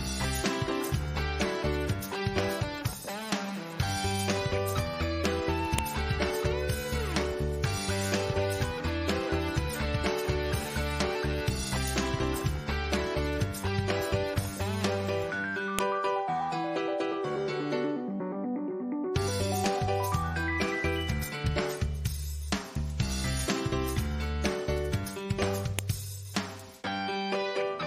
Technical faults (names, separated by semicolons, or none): file header played as audio